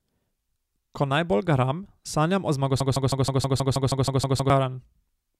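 Speech, with a broken-record loop from 2.80 s to 4.50 s. Just after "najbolj garam sanjam o", a 0.16 s fragment repeats exactly, back to back, 11 times. The speech that belonged there is lost. A stalled player or stream resending its last buffer is the likely cause.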